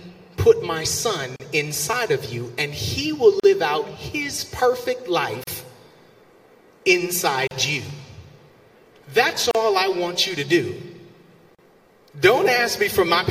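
Separately encoded pieces were joined without trimming the encoder's lead-in delay and last-frame padding, leaving a gap at a join of encoded pieces roughly every 2 seconds. The sound drops out for about 37 ms at 1.36, 3.40, 5.44, 7.47, 9.51 and 11.55 s. Each gap is a brief hole of silence with abrupt but slightly softened edges, after which the audio resumes exactly where it broke off, giving a regular stutter.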